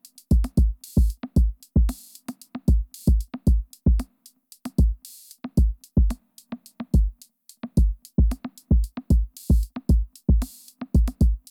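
From 6.04 to 8.06 s the audio slows by 5.3% and drops about 95 cents, then snaps back, likely a drift correction step in clock-matching software.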